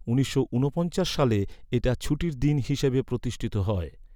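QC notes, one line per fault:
No faults detected in this speech clip.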